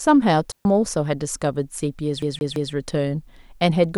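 At 0.52 s the speech drops into a clean hole of near silence lasting about 133 ms, ending at 0.65 s. This is a digital wireless dropout. The receiver lost too much data and muted quickly. No burst of noise comes before or after.

From 2.22 s to 2.73 s the CD is stuck on one turn. A scratch sends the laser back a track at the same spot. The same 168 ms slice plays three times. A brief mute marks each jump, giving a fast, even stutter.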